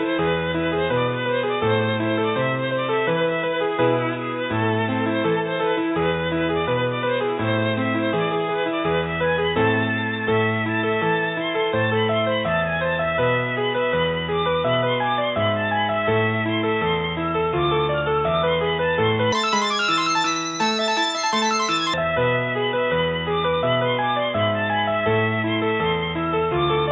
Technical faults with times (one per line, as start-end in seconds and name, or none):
19.32-21.94 wrong sample rate